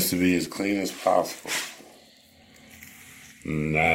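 At 3.43 s there is a tiny skip where roughly 6 ms of sound disappears. This is an overlap between stream segments: two segments claimed the same span of time, and the player discarded the overlapping part even though that audio was not actually duplicated, so the material on either side was butted together. The timing suggests one-second segments. On a waveform the trace jumps abruptly to a new level at that point. A spectrogram shows a thin vertical broadband line there.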